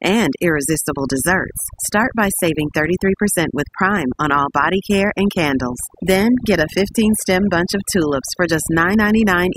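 A speech recording with overdone noise removal throughout: the background falls to near silence dotted with twinkling specks, and quieter parts of the voice are cut away along with it. Unlike a noise gate, the cuts happen band by band, not as whole-signal on/off switching.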